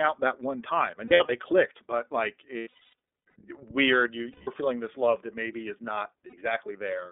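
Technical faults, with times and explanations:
Throughout: iLBC codec. The sound is confined to a telephone band of 300 Hz to 3.6 kHz, with a plainly audible rough, slightly synthetic texture, consistent with iLBC's 13.33 kbps mode and its 30 ms frames. Each frame's excitation is coded on its own, so the fine detail is approximated rather than carried over. A spectrogram shows a hard ceiling at 3.6 kHz, nothing below 300 Hz, and smeared, grainy harmonics.
1.05–1.30 s, 2.58–3.36 s, 4.32–4.50 s, 6.26–6.34 s: lost iLBC frames. These fall after "out that one time", around "clicked but like", and before "feeling this love that". Losses total 150 ms, 540 ms, 150 ms and 60 ms, and the first two are scattered in runs of up to about a tenth of a second. The decoder repeats the last pitch cycle with added noise, which sounds like a held, buzzy vowel. A spectrogram shows flat, repeating harmonic stripes, and sound recovers immediately afterwards.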